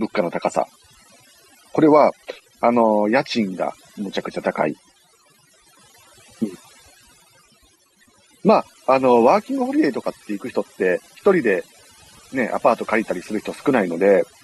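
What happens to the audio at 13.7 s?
Overdone noise removal is present at 13.7 s, as it is across the whole clip. A noise reducer set far too hard cuts individual frequency bands whenever they approach its noise estimate, taking quiet speech detail with them, so the background drops and breaks up into twinkling, warbling specks.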